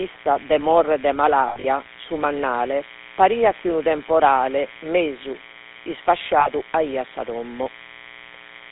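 Throughout, a steady, raspy mains buzz at 60 Hz sits about 20 dB below the speech. Its sharp switching harmonics make it harsher than a smooth hum. The speech also carries a gravelly, buzzy GSM full-rate codec roughness, band-limited to 250 Hz–3.7 kHz, which fits 13 kbps GSM rather than a plain telephone filter. Lost GSM frames occur from 1.48 to 1.65 s (120 ms scattered, longest run around 70 ms) and from 6.40 to 6.50 s. There, the last sound is held as a metallic ring rather than a clean dropout.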